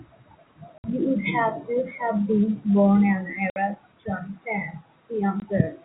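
Speech over a narrowband telephone-style channel, broken by abrupt silent gaps with hard edges at 0.78 to 0.84 s, 3.50 to 3.56 s and 5.40 to 5.42 s. This is packet loss filled with silence: the 60 ms holes fit three lost 20 ms packets, and the last fits one.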